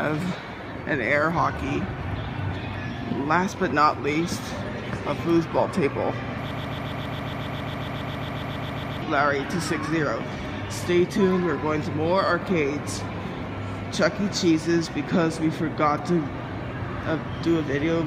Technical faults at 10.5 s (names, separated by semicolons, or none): none